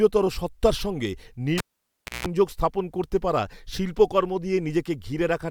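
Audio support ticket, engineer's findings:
Cable pulled and plugged in on live input, 1.58–2.27 s. Pop at disconnect, 0.64 s near silence including 0.18 s of 60 Hz mains buzz as the tip meets the socket before ground, second pop on reseat. Suspect connector or jack.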